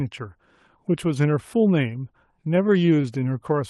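From 2.51 to 3.05 s you get repeated stalls, a stutter: late packets kept draining the jitter buffer, so the receiver stretched the last sound over six short gaps, the longest 14 ms, about 59 ms total. Nothing's lost, it just drags and judders.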